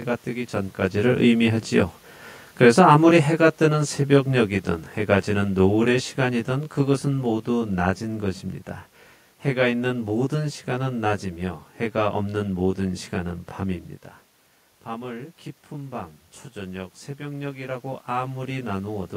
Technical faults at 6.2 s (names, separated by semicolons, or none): channel delay (comb filtering); automatic gain falling